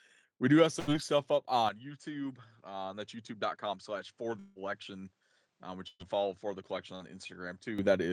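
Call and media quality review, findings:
Burst of packet loss at 0.79–0.90 s, 5.88–6.02 s and 6.95–7.03 s. Receiver jitter buffer/PLC. Last sound extended and faded for 80, 117 and 49 ms, then a skip forward; the second ends in a 10 ms silence. Spectrogram: smeared, decaying band, then an abrupt content jump.

Input switched to a poorer device, 1.69 s to 7.79 s, no gap at the switch. Sound turns duller and quieter. Likely cause is a capture-path change to a lower-band microphone or headset profile. Spectrogram: nothing above 9 kHz from 1.69 s. Waveform: about 10 dB lower, new noise floor roughly 45 dB below signal.

Long network dropout at 4.39–4.59 s, likely from a transport stall. Concealment holds and fades the last sound for about 160 ms, and roughly 160 ms of audio never plays. Spectrogram: a frozen, fading band with no new onsets, then a discontinuous resume.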